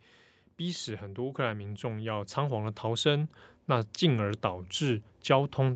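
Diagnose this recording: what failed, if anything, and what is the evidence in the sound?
Automatic gain rising in the call processing stage: from 0.58 s to the end, the speech and the background noise swell together as the gain control judges the input too quiet and steadily raises its gain. Because the noise floor climbs along with the speech, and the rise is slow and continuous rather than snapping back between phrases, this is not compressor pumping or a louder talker. The call microphone processing also band-limits the audio to nothing above 8 kHz.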